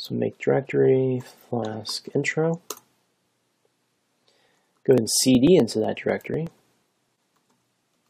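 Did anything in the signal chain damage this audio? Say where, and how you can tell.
Yes, at two stages. The first is the codec stage, with damaged data in the compressed stream at 1.61 s. A single short glitch cuts through the sound there, as the decoder misreads the corrupt frame, loses sync and skips forward to the next valid header. Because it happens once, lasts only a few milliseconds and has no rhythm, it reads as file or stream corruption rather than a timing problem in the hardware.

The second is the driver or buffer stage, with periodic USB or driver dropouts from 4.23 s to 7.95 s. About thirty small ticks fall every 0.124 s. At each one roughly a millisecond of audio is skipped outright, not replaced by silence, so the waveform jumps and clicks. The strictly even spacing points to a background task blocking the bus or driver on a fixed schedule. That regularity separates it from the isolated codec glitch and from random network loss.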